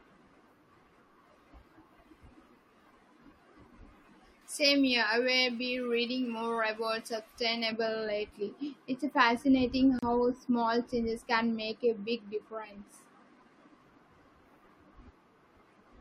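From 4.42 to 7.72 s you get pre-emphasis left on: the treble boost, which fits a J.17 curve, never got its matching cut, so 10 kHz sits about 11 dB hotter than 1 kHz. The speech turns thin, bright and hissy with sibilance.

Then at 9.99 s there's a gap at a join of encoded pieces, a 36 ms gap running to 10.03 s, just before "small changes can make". Separately encoded chunks were stitched untrimmed, leaving encoder delay and padding in, so the sound drops out with smeared edges and resumes.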